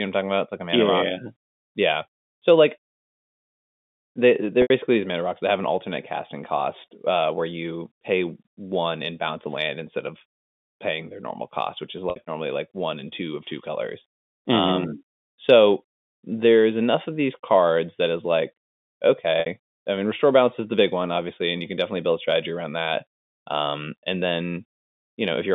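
At 4.62 s, 12.10 s and 19.40 s, the speech briefly holds on a buzzy repeated tone during losses of 80, 60 and 60 ms. This is packet loss with pitch repetition.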